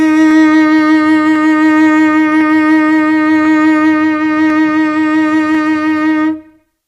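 From 0.31 s to about 6.6 s the music carries a click roughly every 1.05 s, around seven in all. The steady spacing points to clock drift buffer slips. Two devices are likely running on separate clocks about 150 parts per million apart, so the buffer between them creeps until a handful of samples is dropped or repeated. Unlike dropouts from packet loss, which land at random, these clicks keep a metronomic interval.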